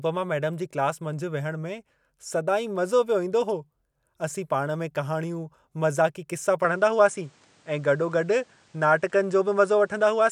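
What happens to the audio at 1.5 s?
Nothing goes wrong at 1.5 s; the speech carries on intact through that moment with no dropout, click or distortion.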